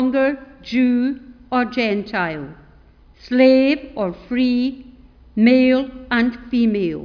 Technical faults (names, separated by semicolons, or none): none